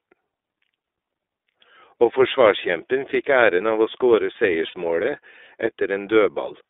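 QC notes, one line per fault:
Throughout: iLBC codec. The audio is confined to a telephone band of about 300 Hz to 3.6 kHz, so the low body and all high-frequency detail are gone. The coding damage is plainly audible as a rough, slightly synthetic texture on the speech. It comes from the codec coding each frame's excitation independently of the previous frame. The sound fits 30 ms frames at the 13.33 kbps mode.
4.68–4.74 s: lost iLBC frames. For 60 ms the speech gives way to a short held, faintly buzzy vowel-like tone. The decoder concealed the gap by repeating the last pitch cycle mixed with noise, which fits two lost 30 ms frames. Normal speech returns immediately after 4.74 s with no lingering smear, because each iLBC frame decodes without relying on the one before it.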